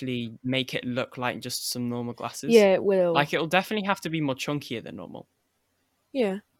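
No technical faults can be heard anywhere in this speech recording. There is nothing in it that calls for a timestamp or an explanation.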